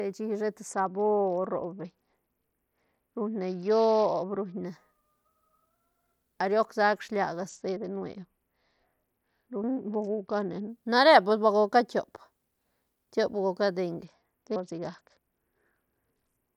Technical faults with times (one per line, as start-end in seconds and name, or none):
0.68-4.65 Bluetooth SBC bit pool drop
7.49-10.69 Bluetooth SBC bit pool drop
14.05-16.56 Bluetooth SBC bit pool drop